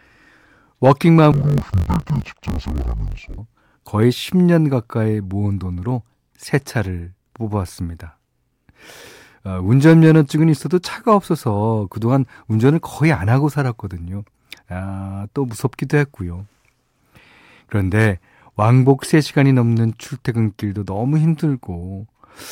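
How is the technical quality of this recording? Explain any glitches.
The recording has one glitch, from 1.32 s to 3.39 s: interleaved audio read as planar. Alternating left-right samples in each 20 ms block were split into halves, so the sound drops an octave and turns dull and robotic, buzzing at 50 Hz. A spectrogram shows harmonics compressed downward with 50 Hz striping, and the waveform shows choppy discontinuities every 20 ms.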